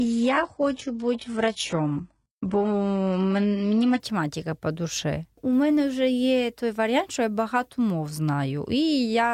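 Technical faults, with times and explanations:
0.0 to 4.0 s, adaptive stream starting at a low bitrate: the speech sounds dull and coded, with nothing above 11.1 kHz, then suddenly clears without any gap just before "по душі", which fits playback opening on a roughly 12 kbit/s HE-AAC version before stepping up to 96 kbit/s AAC-LC.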